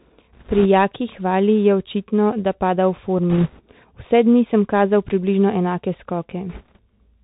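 Speech heard through a Bluetooth CVSD headset codec, which fits a 64 kbps link: the one-bit delta coding leaves nothing above 4 kHz, a granular hiss under the voice, and scratchy s sounds where loud highs outrun the adapting step. A spectrogram shows a hard ceiling at 4 kHz with a grainy floor. Bit errors on the Bluetooth voice link add rushing crackle at 0.33–0.66 s, 3.30–3.61 s just after "da pada v" (the heaviest, near a few percent of bits), and 6.50–6.79 s. These show as brief bands of broadband noise, with no sharp click spikes in the waveform.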